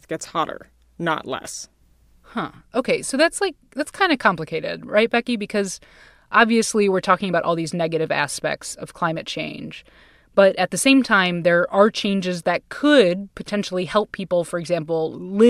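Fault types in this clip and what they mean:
No technical faults can be heard anywhere in the speech recording; the signal stays continuous and steady throughout.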